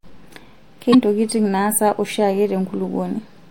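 Sample clock jitter runs through the whole speech recording. The converter's sampling clock wanders by a fraction of a microsecond, so each sample is captured slightly early or late at random. The resulting error scales with how steeply the waveform is changing, sitting roughly 45 dB below the signal. It is audible as a faint hiss or grain that thickens on loud and sibilant passages and disappears in the pauses.

From 0.90 to 0.95 s there is damaged data in the compressed stream. Over this 42 ms stretch the coded frames are corrupt, so the decoder misreads them, loses frame sync and has to hunt for the next valid header before normal decoding resumes. The result is a brief chirp, squawk, click or short hole that cuts across the speech.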